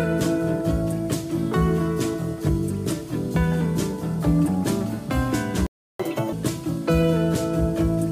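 At 5.67 s the sound cuts out mid-flow and stays silent for about 330 ms, until 6.00 s. This is a playback stall, likely caused by the player running out of buffered data or having its thread blocked, so output halted until it recovered.

From 6.00 s to 6.33 s the sound runs at double speed, with pitch raised by roughly ten semitones, before snapping back to normal. This is catch-up at higher speed: the player resamples its backlog to recover the time lost in the stall.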